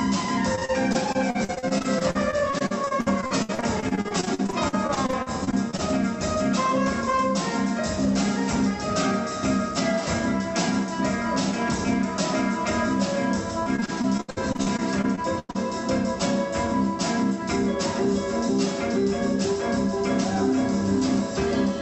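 Repeated packet loss (robotic sound) occurs from 0.55 to 5.80 s and again from 13.63 to 15.57 s. Dozens of packets went missing, each gap up to 63 ms and 97 ms respectively, patched by stretching prior audio, leaving about a quarter of each span choppy.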